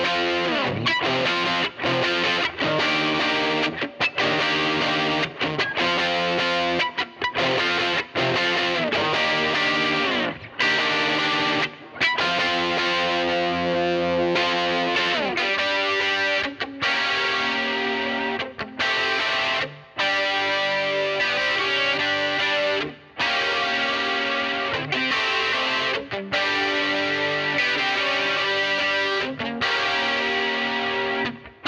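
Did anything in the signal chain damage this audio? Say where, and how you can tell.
No, nothing along the chain left a mark I can hear, so there's no damaged stage to point to here.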